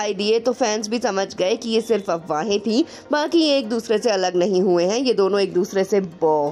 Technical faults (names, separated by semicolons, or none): none